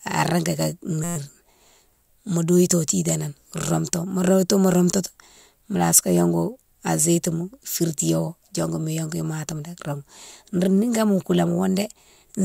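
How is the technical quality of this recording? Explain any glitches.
One glitch stands out. From 1.04 to 1.16 s, a system hang loop repeats a 5.8 ms slice about twenty times, fitting a 256-sample buffer, making a steady 172 Hz buzz, unlike a dropout's silence.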